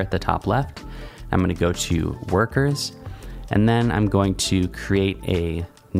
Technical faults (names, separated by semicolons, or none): clock drift between sender and receiver; repeated timing corrections